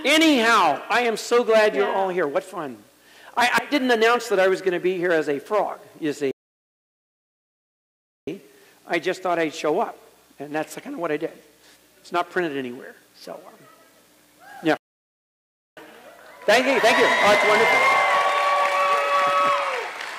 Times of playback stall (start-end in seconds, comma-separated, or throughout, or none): 6.31-8.27, 14.77-15.77